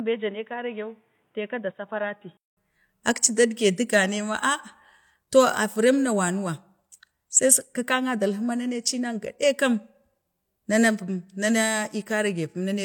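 Speech, with an input switched to a poorer device at the start. From 0.0 to 2.57 s the sound is dull and boxy, with nothing above 3.8 kHz, a level roughly 10 dB lower, and a different background noise sitting around 45 dB below the signal. At 2.57 s a gap of about 200 ms precedes a return to full bandwidth and normal level. The likely cause is the system capturing from a narrower-band microphone or headset call profile before changing inputs.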